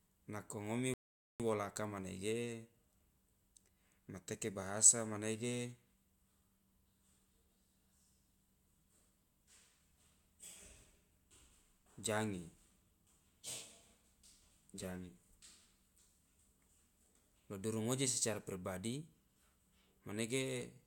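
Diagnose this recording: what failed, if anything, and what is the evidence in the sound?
Rebuffering stall at 0.94–1.40 s, playback stage: the player ran out of downloaded audio, so speech goes silent for 0.46 s, then resumes exactly where it stopped.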